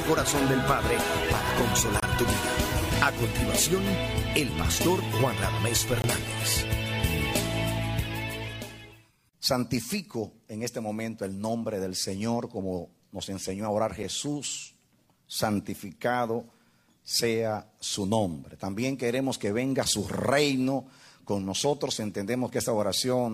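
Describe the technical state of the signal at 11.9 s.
At 11.9 s the signal is intact, with no audible technical fault.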